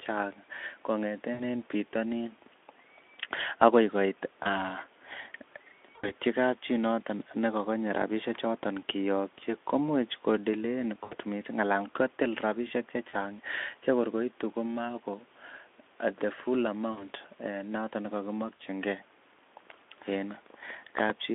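Speech, narrowband through a Speex-style path of roughly 200 Hz to 3.5 kHz, broken by VoIP packet loss concealed by the speech codec at 1.33, 4.43, 5.95, 11.03, 13.09, 16.91 and 18.56 s. Each gap of 20 to 80 ms is bridged by a fading extrapolation of the preceding sound, heard as a buzzy tone or coloured noise.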